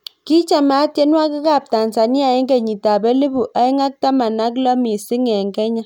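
No technical faults can be heard anywhere in the speech. There is nothing in the audio chain that calls for comment.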